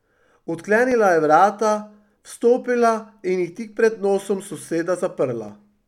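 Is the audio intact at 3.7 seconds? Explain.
No. The span from 0.92 to 5.49 s likely suffers clock drift buffer slips: two clocks differing by a few hundred ppm let the buffer drift until a small block of samples is dropped or repeated about every 1.14 s. This puts a regular click into the speech around 3.7 s.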